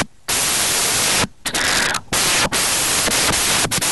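From start to end the speech suffers from samples built from the wrong bytes: misassembled values promote the noisy low bits, producing loud, harsh broadband noise.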